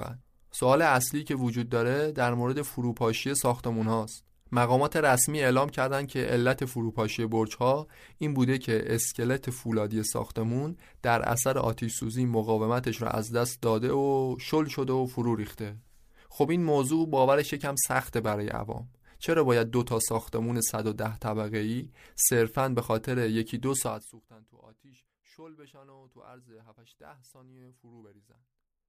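At 23.8 to 24.3 s there's zipper noise: the speech gets pulled down by something like 25 dB in 2 dB steps, around thirty a second, with no smoothing. Each jump clicks, so you hear a quick ticking zip during the drop.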